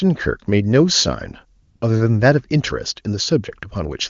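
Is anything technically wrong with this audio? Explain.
Yes. AMR comfort noise fills 1.61 to 1.81 s: speech frames stopped for 200 ms and synthetic noise replaced the real background, showing as a flat, featureless band on the spectrogram and a steady low block on the waveform.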